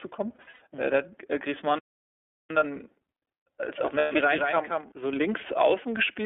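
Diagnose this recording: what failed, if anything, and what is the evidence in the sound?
iLBC codec, throughout: a codec-stage fault. The speech sits in a 300 Hz to 3.5 kHz line band with a plainly audible rough, synthetic edge, which points to iLBC's 13.33 kbps, 30 ms frame mode coding each frame's excitation independently.

Lost iLBC frames, 0.35 to 0.60 s and 3.98 to 4.12 s: a network-stage fault. About 180 ms is lost in the first gap, with runs up to about a tenth of a second, and 120 ms in the second. The decoder fills each gap by repeating the last pitch cycle mixed with noise, giving a held, buzzy vowel. Because frames stand alone, the voice is clean again at once, as at "mhm äh da hat".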